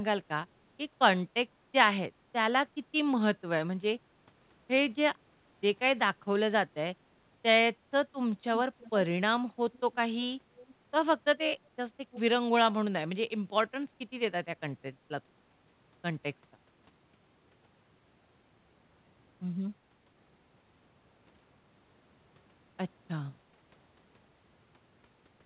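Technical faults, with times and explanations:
8.79–8.90 s, 9.73–9.95 s, 10.61–10.75 s and 12.11–12.20 s: echo leak. Brief, faint copies of the speech return about 318 ms late, roughly 20 to 30 dB below it, likely because a far-end loudspeaker's echo canceller let part of its microphone pickup back into the call. Unlike room reverberation, which decays smoothly, each scrap is a distinct repeat at the same fixed delay, band-limited like the rest of the narrowband call audio.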